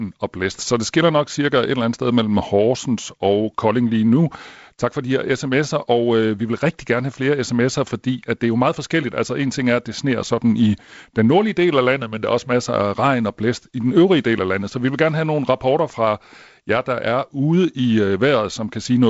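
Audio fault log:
Nothing goes wrong anywhere in this speech, which carries the usual G.722 wideband telephone coding with its light hiss and its top end stopping at about 7.7 kHz.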